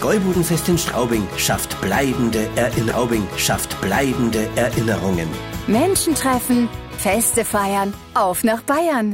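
A faint, steady rattle runs from 0.13 s almost to the end at 9.12 s: tiny single-sample ticks about every 30 ms, a couple of hundred in all, clearest where the sound is loud and sustained. These are clock slip clicks, likely from two devices running on unsynchronised clocks that differ by roughly 700 parts per million. Each time that drift builds up to a full sample, one sample is dropped or doubled.

At 2.89 s a small blip marks a jump back, and the two seconds up to 4.89 s play a second time, lengthening the audio by 2 s. This is a stream segment repeated: the player fetched or queued the same chunk twice and played both copies in sequence, so the passage is heard again.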